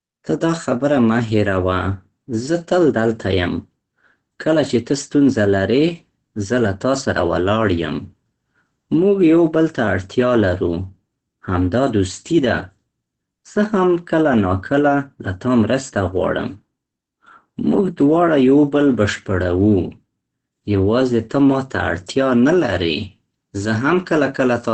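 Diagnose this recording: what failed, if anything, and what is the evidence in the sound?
Codec stage: the speech is muffled and hoarse throughout, and a spectrogram shows an empty band above 8.5 kHz, likely from Opus compression in speech mode.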